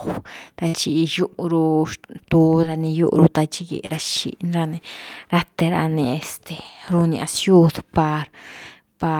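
At 0.67 s a burst of packet loss cuts into the speech for about 80 ms. Roughly 60 ms of audio never arrived, and the receiver bridged the hole by carrying the last sound forward for about 60 ms while fading it down. When playback picks up at 0.75 s it has jumped ahead, so a stretch of speech is simply absent. The length, the audible decay and the skip set it apart from the shorter dropouts that follow.

Short concealed packet loss appears twice, at 2.61 to 2.64 s and at 3.86 to 3.91 s. Each time about 20 ms failed to reach the decoder, and the gap was patched with a brief continuation of the preceding sound, about 12 ms and 26 ms respectively, before blending back into real audio. These register as a quick smear or wobble rather than a held, fading stretch.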